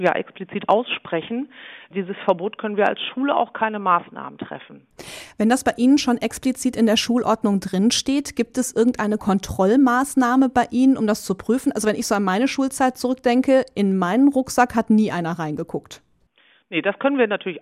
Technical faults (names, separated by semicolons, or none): none